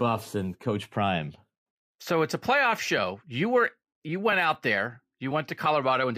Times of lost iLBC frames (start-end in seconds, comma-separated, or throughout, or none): none